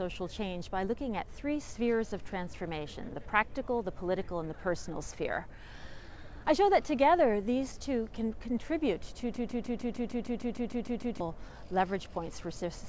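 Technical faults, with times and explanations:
9.36–11.20 s, broken-record loop: a 151 ms fragment repeats twelve times back to back, likely a stalled stream resending its last fragment, so the audio meant for that span is lost.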